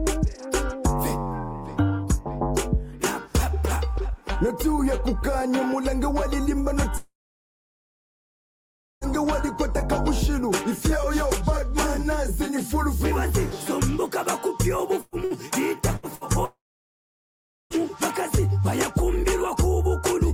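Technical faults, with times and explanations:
6.97–9.04 s and 16.45–17.73 s, long network dropout: the last sound carries on briefly as a fading buzz or hiss, then about 1.9 s and 1.1 s of silence follow before the sound resumes further on. The cause is likely lost network audio, about 2.04 s and 1.26 s of it. A spectrogram shows a short smeared tail, then a blank band.
15.01–15.15, 15.24–15.34, 15.97–16.06 and 16.15–16.24 s, burst of packet loss: about 120 ms, then three stretches of about 60 ms each, are missing. The receiver holds and fades the last sound, giving short buzzy or hissy patches. The waveform shows brief decaying repeated cycles and then a jump.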